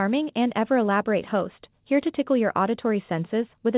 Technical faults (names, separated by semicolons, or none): none